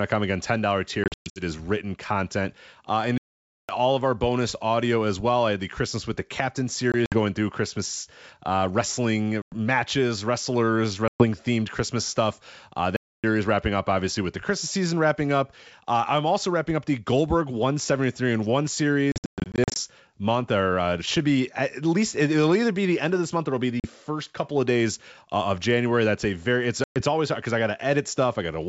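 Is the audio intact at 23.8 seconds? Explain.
No, there's packet loss on an ADPCM call: a hard-edged 40 ms silent gap at 23.80–23.86 s, about two packets. The decoder's predictor loses sync, so the sound comes back slightly off before settling.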